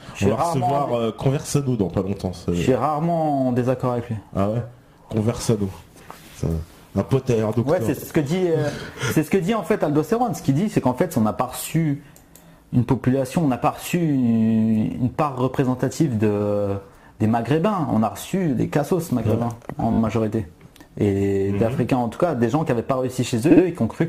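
Repeated frames stutter at 7.97 s, 19.92 s and 23.50 s. Short blocks of 50, 20 and 60 ms replay two, three and two extra times, lengthening the audio.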